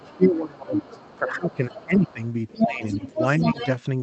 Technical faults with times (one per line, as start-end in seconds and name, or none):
0.00-2.20 speech suppressed in double talk
0.08-0.39 other side's voice leaking through
0.74-3.67 other side's voice leaking through
2.55-3.66 speech suppressed in double talk